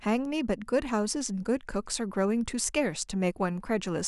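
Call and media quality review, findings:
No faults found in this speech recording. Nothing to escalate on this ticket.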